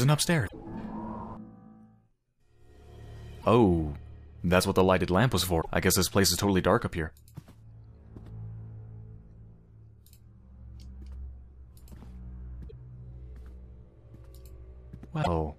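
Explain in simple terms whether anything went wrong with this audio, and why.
Five short glitches, at 0.46–0.54, 3.38–3.45, 5.58–5.66, 12.66–12.73 and 15.19–15.27 seconds, come from damaged data in a compressed stream. Corrupted bytes made the player lose its place and search for the next readable chunk. That comes from the file, not from a microphone problem.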